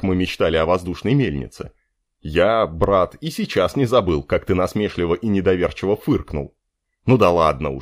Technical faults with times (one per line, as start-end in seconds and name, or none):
0.93 dropped samples
2.84 dropped samples
4.09 dropped samples
4.90 dropped samples
5.95 dropped samples